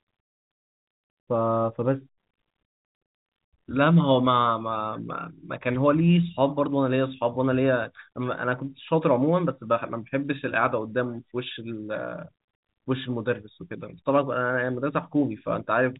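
No faults are audible in the speech; it has the narrow telephone band of G.711 coding, with nothing above about 3.8 kHz.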